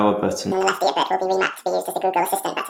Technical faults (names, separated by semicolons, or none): audio read two samples at a time (double speed)